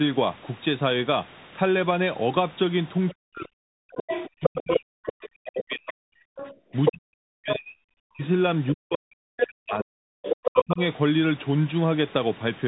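Throughout, the Bluetooth CVSD headset codec band-limits the speech to about 3.8 kHz and leaves scratchy sibilants and a granular hiss, a grainier sound than a simple low-pass cut. The other side's voice leaking through, likely from imperfect echo cancellation, appears as a second talker at 3.09, 3.95 to 5.75, 6.36 to 6.91, 7.49, 8.68, 9.37 to 9.47 and 10.22 to 10.64 s. It is mostly as loud as the main speech, unlike a faint room reflection. From 3.13 to 10.8 s, the main speech is suppressed in double talk: it dips by as much as about 40 dB, for about five seconds in all, while the other side speaks. These are likely gating dropouts tied to that overlap, not random packet loss.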